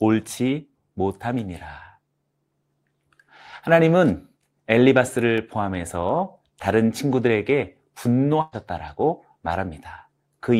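At 5.38 s a block of digital silence appears: for about 1.1 ms the output drops straight to silence, which points to the playback buffer going unfilled for an instant before valid audio returned. Because the signal jumps to silence and back with no fade, both edges form a sharp discontinuity, and at this tiny length the two merge into a single brief tick in the speech.

From 8.41 to 8.56 s comes a burst of packet loss, where a run of incoming audio never arrived in time to be played. The receiver covered the hole by extending the last sound it had for about 112 ms, turning it down as it went, so the speech smears into a held, fading tone or hiss. Playback then picks up further along, with about 120 ms of the original speech skipped entirely.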